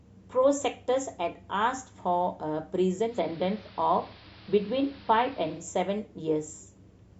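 From 3.01 s to 5.68 s the speech turns dull, shifts level by about 1 dB and gains a faint hiss some 25 dB down. The change fades in over 193 ms. This is digital radio blending to analogue: the receiver falls back to the station's AM broadcast, then returns.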